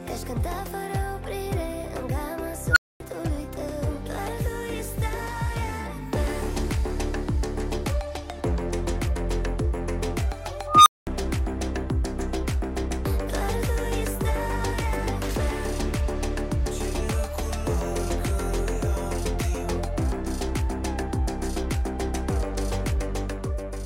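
At 2.71 s an unstable filter takes over: a tone around 1.5 kHz swells from nothing to clipping in about 52 ms, then drops into roughly 240 ms of silence by 3.00 s. It recurs at 10.67 s, near 1 kHz, building more slowly over about 189 ms before cutting out for about 210 ms until 11.07 s. Unlike acoustic feedback howl, which holds at a ceiling, each squeal collapses into dead silence as the runaway filter overflows and resets.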